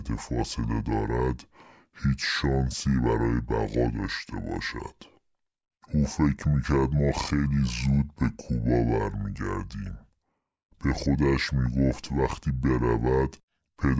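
A speech recording plays back too slow and too low from start to finish. This is a wrong sample rate fault. The samples are being clocked out at two thirds of their intended rate, with no conversion. Speed drops to 0.667 times normal. Pitch falls by about 7 semitones, close to a musical fifth. Voices sound heavy and dragged out. The ratio fits audio recorded at 24 kHz but played at 16 kHz.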